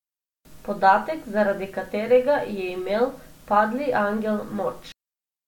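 No technical faults are audible anywhere in the speech recording, so the signal stays stable and intact throughout.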